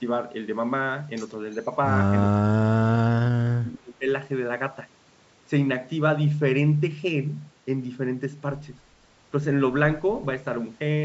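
At 1.51 to 1.6 s, an echo canceller on a loudspeaker end likely failed to remove everything its microphone picked up, and a fragment of the call was sent back as an echo leak. It arrives about 350 ms behind the original and is very faint, far below the speech, so it is heard as a brief ghost of what was said a third of a second earlier, lasting under a tenth of a second.

From 2.44 to 4.07 s, both sides were likely talking at once, and the echo canceller, unable to separate its local talker from the loudspeaker echo, turned everything down. This is speech suppressed in double talk. Across roughly one and a half seconds of that stretch, the speech dips and breaks into pieces, at its worst dropping by around 30 dB, so the talker seems to fade out and cut in and out while the other side speaks.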